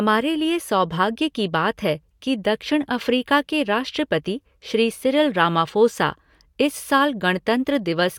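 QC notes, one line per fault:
No faults detected in this clip.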